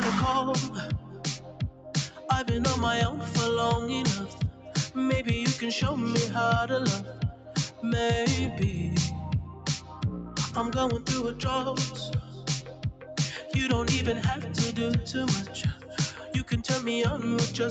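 A noise suppressor meant for speech was left running on this material, so the whole clip pumps and thins, with the level swinging by roughly 10 dB as the suppressor mistakes sustained parts for noise. The call microphone path is also audible, with nothing above 8 kHz. The sound is cut by the noise suppressor at 0.69–2.26 s, 4.26–4.96 s, 7.04–7.83 s, 9.44–10.57 s, 11.89–13.15 s and 15.74–16.3 s. Held or decaying parts sink by about 9 dB, about 8 dB in the last one, for up to a second at a time, while sharper onsets mostly survive.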